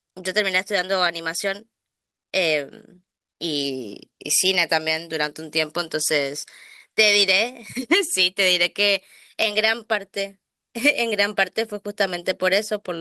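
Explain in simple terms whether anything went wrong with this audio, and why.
Lost packet rebuilt from error correction occurs at 0.75–0.81 s, 4.55–4.57 s, 9.51–9.61 s and 12.03–12.09 s. Small pieces of the stream went missing, and the decoder filled each one from a lower-quality backup copy. The speech never cuts out, but those moments sound rougher and noisier.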